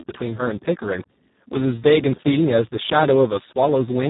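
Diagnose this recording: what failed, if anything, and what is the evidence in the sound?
The codec stage failed: the speech went through Speex at a starved setting, which fits a bitrate near 4 kbps. With too few bits for the excitation, the speech turns hoarse and noisy throughout, and nothing is present above 3.8 kHz.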